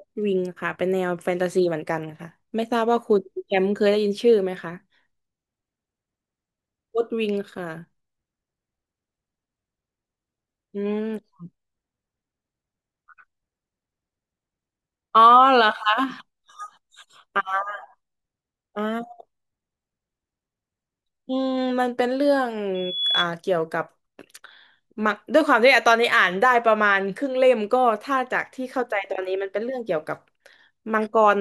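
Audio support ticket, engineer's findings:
Loudspeaker feedback squeal, 22.74 to 23.27 s, on speech. Single 3.4 kHz tone swells in over roughly a third of a second, peaks around speech level. Mic hearing its own PA, loop gain tipping past one at that frequency. Likely mic placement or monitor level.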